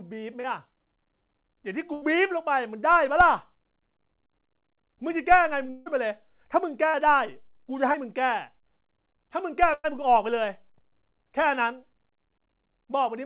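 Short concealed packet loss hits this speech recording at 0.40 to 0.46 s and 7.92 to 7.96 s. About 40 ms and 20 ms of audio never arrived, and the receiver bridged each gap by extending the preceding sound, leaving a brief smear or wobble. Burst of packet loss occurs at 1.94 to 2.04 s, 6.88 to 6.96 s and 9.74 to 9.86 s, dropping about 80, 60 and 100 ms. In each, the last sound is stretched into a fading buzz or hiss before the speech resumes further on. The third burst ends in about 20 ms of silence. At 5.70 to 5.88 s a long network dropout is the likely cause of a 160 ms hole, filled throughout by a decaying continuation of the preceding sound rather than silence, with the speech resuming past the lost section. All of this sits on a telephone-band signal with nothing above 4 kHz, which fits a G.711 A-law call path.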